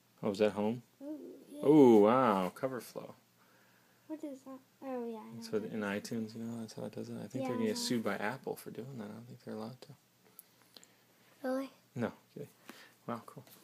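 Nothing in here trips up at any point, so there's simply no technical fault to report along the way.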